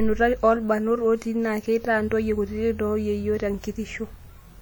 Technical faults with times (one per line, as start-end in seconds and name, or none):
0.00-4.62 WMA compression